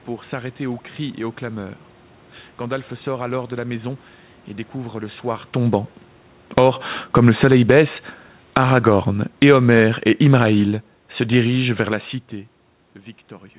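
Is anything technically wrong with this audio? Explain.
Yes, the automatic gain control misbehaves in the middle of this speech clip.

Automatic gain falling, 6.42 to 7.72 s and again 8.41 to 12.08 s: the gain control judged the input too loud and pulled its gain down gradually, by about 7 dB and then about 8 dB. Speech and room noise sink together, a slow fade rather than an abrupt drop.

Automatic gain rising, 6.63 to 7.04 s: inside the first fall, the control briefly swung the other way and pushed gain up by about 5 dB. Voice and background swell together for under half a second before the downward pull resumes, giving a pumping effect.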